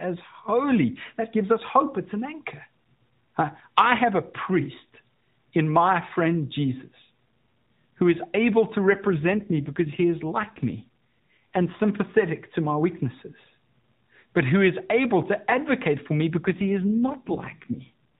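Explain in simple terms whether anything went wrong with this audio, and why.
An AMR rate drop occurs from 8.90 to 11.81 s, after "who is able to", and from 16.40 to 17.90 s, after "to advocate for me". The phone network pushed the mobile speech codec to a leaner setting, so the speech turns rougher and more synthetic, with no gap, until it recovers.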